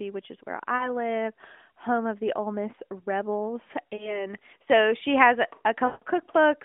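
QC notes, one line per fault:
0.76–0.91 s, 3.96–4.27 s and 5.86–6.04 s, lost AMR speech frames: the first two events are short stalls, about 40 ms of missing sound (which fits two 20 ms frames), heard as a brief warbling dip. The third runs about 160 ms, and the speech smears into a drawn-out held tone that fades toward silence before returning weak or rough. The AMR-NB decoder repeats the last good pitch and vocal-tract settings at falling gain. That smoothed, sustained fade separates it from a hard dropout or click, which cuts off abruptly.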